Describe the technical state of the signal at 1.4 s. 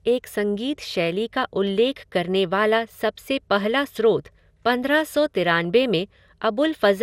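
At 1.4 s the speech sounds swirly, smeared and hollow, with blurred attacks and nothing above 16.6 kHz, throughout the clip. This is likely generation loss from repeated re-encoding, pointing to MP2 at around 96 kbit/s.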